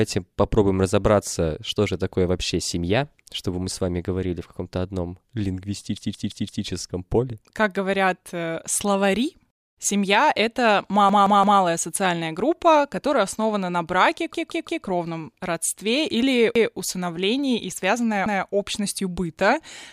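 Audio arrived late, so the device replayed its last 171 ms block, which fits an 8192-sample buffer. This repeated buffer is heard as a stuttering loop with hard joins at 5.97 s (four extra plays), at 11.09 s before "социальная группа которая основана" (three), at 14.34 s after "которая основана на браке" (three), and at 16.56 s between "родстве или" and "усыновлении и связанная общностью" (one).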